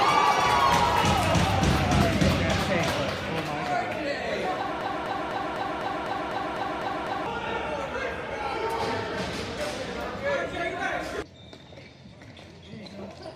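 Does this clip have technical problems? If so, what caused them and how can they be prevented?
Yes. A broken-record loop runs from 4.81 to 7.26 s: a fragment about 0.25 s long plays ten times back to back, each repeat identical. This likely happened because the player, encoder or stream stalled and kept resending the last block it held, so the audio meant for those 2.45 s never arrives. Prevention: use larger playback buffers and detect stalls, so the output fades to silence or resyncs instead of replaying stale data.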